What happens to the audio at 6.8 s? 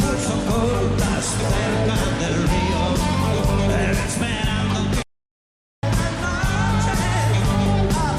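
Nothing goes wrong at 6.8 s; the audio carries on intact through that moment.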